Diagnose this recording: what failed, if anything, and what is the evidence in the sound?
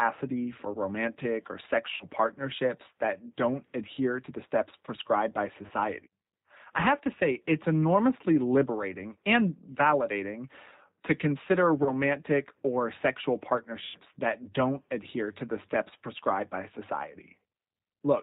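Throughout, the speech is band-limited, with nothing above 4 kHz, and it has a slightly rough, synthetic quality. That is plainly audible codec damage from the G.729 codec (the A variant) at 8 kbit/s, applied at the codec stage of the call path. Rather than transmitting the waveform, it rebuilds each 10 ms frame from a vocal-tract filter, a pitch predictor and a handful of pulses, so fine detail and natural texture are lost.

Four times the sound smears into a buzzy or noisy, fading stretch and stays weak briefly afterwards: 1.94–2.05 s, between "for romantic or" and "partnerships that don't adhere"; 5.66–5.72 s, after "the steps prescribed by"; 11.83–11.93 s; and 13.85–13.98 s, between "or sexual" and "that don't adhere to". This is VoIP packet loss concealed by the speech codec, a network fault. Gaps of roughly 60, 30, 30 and 90 ms fit 30 ms packets. The decoder extrapolated from its last pitch and filter state with decaying gain.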